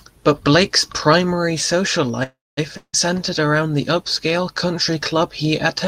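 A speech recording carries two transport faults close together. Just after "primary social", at 2.23 s, a call audio freeze sets in. The last sound is stretched into a fading buzz that sinks to about 0.21 s of silence before the talker resumes at 2.59 s. About 0.34 s of filler is inserted, yet nothing is skipped, so everything afterwards runs 0.34 s late. The likely cause is packets held up in transit, leaving the jitter buffer empty until they arrived. Shortly after, from 2.77 s to 2.95 s, a long network dropout occurs. Again the final sound is held and decays, ending in roughly 0.07 s of silence. This time the audio picks up 0.16 s further on, so that stretch of speech is simply gone, and the filler replaces it rather than delaying it. The signature points to a run of packets that was lost outright and never delivered.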